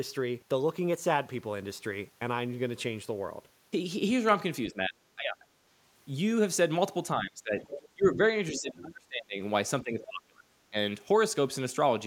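A speech recording with two related faults. Speech suppressed in double talk appears at 4.68–5.45, 7.15–7.58, 7.94–9.4 and 9.82–10.76 s. The voice dips by roughly 15 to 25 dB. An echo canceller likely pulled the talker down while the far side spoke too. The other side's voice leaks through at 7.68–7.89 and 8.54–8.61 s. These are faint scraps, about 10 to 15 dB under the talker. They are likely loudspeaker echo that the canceller failed to remove.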